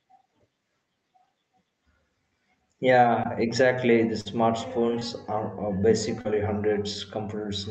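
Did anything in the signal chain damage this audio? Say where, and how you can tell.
Yes, at the network stage. Brief smears or wobbles are audible at 3.23–3.27 s, 4.99–5.03 s and 6.21–6.27 s. This is short concealed packet loss: 20 to 40 ms of audio arrived too late, and the receiver bridged each gap with 12 to 35 ms extrapolated from the preceding sound before crossfading back.

A longer break at 4.21–4.27 s is a burst of packet loss. The sound freezes into a held, fading continuation for about 47 ms, then jumps ahead with about 40 ms gone. The decoder stretched the last audio and ramped it down until real packets returned, heard through the Opus call path's 8 kHz band limit.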